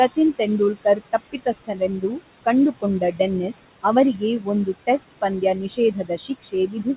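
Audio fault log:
throughout: noise suppressor artifacts. The room noise, about 14 dB under the speech, is pulled down by about 19 dB between words and returns beneath them.
0.74–2.2 s, 3.0–3.2 s, 5.69 s to end: speech cut by the noise suppressor. Quiet speech mistaken for noise is turned down with it, by up to about 17, 10 and 15 dB, so soft sounds come out swallowed.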